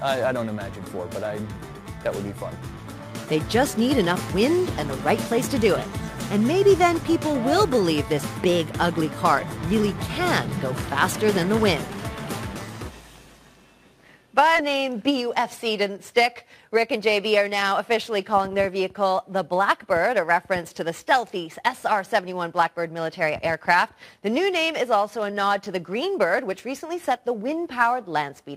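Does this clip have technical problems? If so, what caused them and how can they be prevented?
Yes. The skip ahead at 14.55 to 14.57 s is an abrupt jump where about a second of sound never plays. With no fill in the join, the material before and after the jump butts directly together. The receiver threw away a stretch of audio, either lost in transit or discarded when its jitter buffer overflowed, while later audio was already queued. Playback then resumed from that newer point. A larger or adaptive buffer, paired with a steadier network path, prevents such overflow.

Jitter buffer speed-up follows in two runs: 15.1 to 15.7 s plays at about 107% speed, and 16.6 to 17.3 s at about 109%. Pitch stays the same while the sound runs slightly hurried. The buffer was holding more delay than its target, as happens when delayed packets arrive in a burst. To drain it, the receiver repeatedly cut out short pitch-period-length pieces, removing a few tens of milliseconds in each run. 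Reducing network jitter keeps the buffer from overfilling.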